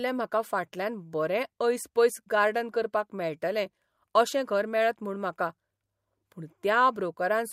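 No technical faults can be heard anywhere in this speech recording. There is nothing in the audio that needs a timestamp or further comment.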